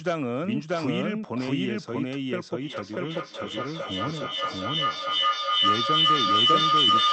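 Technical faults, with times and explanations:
Throughout, doubled audio track: a second, slower capture path or an out-of-step edit likely mixes the audio in twice. A full-band copy at about the same level trails by roughly 0.7 s, dry and with no decay, so every sound gets a flat repeat.
2.62 s to the end, feedback howl: two devices in one room share the call, and the microphone-to-loudspeaker loop gains level on every pass. The repeats grow instead of fading and narrow to a tone near 1 kHz. It pulses about every 0.4 s and peaks about 8 dB above the speech, without ever being broken.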